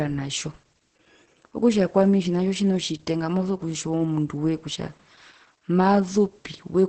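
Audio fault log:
Throughout: Opus voice compression. The speech is muffled, hoarse and a little robotic, with nothing above about 8.5 kHz, so the top end is simply gone. That cutoff fits Opus running its SILK linear-prediction coder in wideband mode. SILK models the voice from a coarsely coded excitation, which gives the rough, buzzy edge. Damage this heavy points to a very low bitrate, something around 10 kbps.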